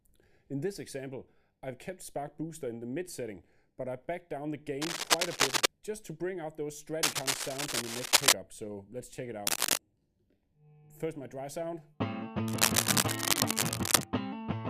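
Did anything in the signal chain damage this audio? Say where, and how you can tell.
Yes, in the analogue wiring: a worn cable or connector, likely moved in use, adds cable scratch noise, bursts of uneven scratching over the sound at 4.8–5.7, 7.0–8.3, 9.5–9.8 and 12.5–14.0 s.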